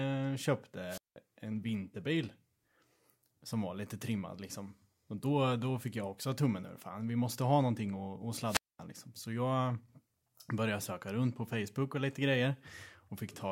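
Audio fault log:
0.88–1.16 s and 8.42–8.79 s, wireless microphone squelch dropout: the radio signal fades, hiss briefly rises, then the receiver's squelch mutes the output for 186 ms and 227 ms before the speech returns.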